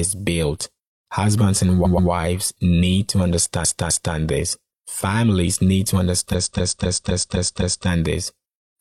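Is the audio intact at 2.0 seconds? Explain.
No. At 2.0 seconds the clip is inside a run of repeated frames, from 1.81 to 2.07 s, just before "wives need to". A short block of compressed audio, about 128 ms long, was decoded and then played two more times. The same fragment of speech comes back twice in quick succession. It sounds like a stutter. This inserts 256 ms, so the sentence is stretched by that amount.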